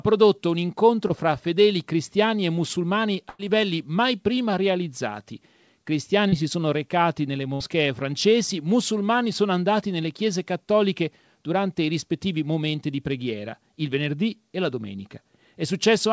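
Speech carried over a WebRTC call path whose G.722 coding leaves nothing above 8 kHz, consistent with a 64 kbps wideband link, shows two kinds of transport fault. Short concealed packet loss occurs at 1.08 to 1.12 s, between "prodotto un" and "fra fedeli cristiani e", and at 6.29 to 6.34 s, just before "si sono recati nelle". About 20 ms and 40 ms of audio respectively failed to reach the decoder in time. The receiver extrapolated the preceding sound over the hole and crossfaded back into real audio, leaving a brief smear or wobble where a short segment is lost. A burst of packet loss appears at 3.30 to 3.41 s and at 7.54 to 7.62 s, the latter between "si sono recati nelle" and "francesi musulmani sono andati". Here roughly 100 ms and 60 ms went missing in a run. Concealment stretched the last sound into a held buzz or hiss that decays before playback resumes further on. The speech that fell in those gaps is simply absent.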